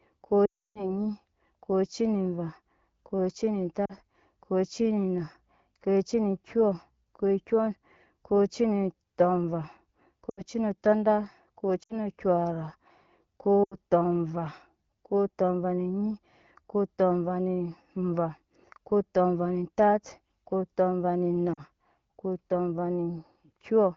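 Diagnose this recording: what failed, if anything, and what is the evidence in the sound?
Network fault: lost AMR speech frames, concealed by the AMR-WB decoder repeating the last good pitch and vocal-tract settings at falling gain. From 0.45 to 0.96 s the speech drops to near silence within two frames. Brief dropouts to near silence follow at 3.85, 10.29, 11.83, 13.63 and 21.54 s. A spectrogram shows frozen, smeared harmonics decaying into blank gaps.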